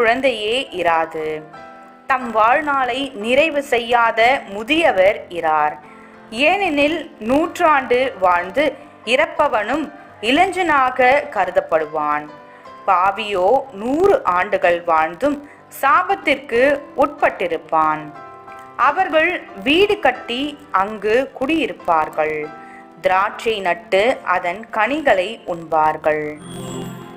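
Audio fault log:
throughout: filter restarted on every block. The filter loses its memory at each block boundary and restarts from silence. A small transient lands every 20 ms, heard as a 50 Hz buzz that tracks the level. Spectrogram: a 50 Hz harmonic comb. Waveform: tiny steps at each boundary.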